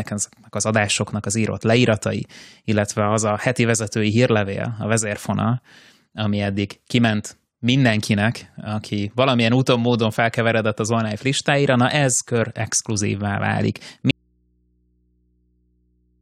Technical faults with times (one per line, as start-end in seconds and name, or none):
14.11-16.21 audio dropout to a faint residue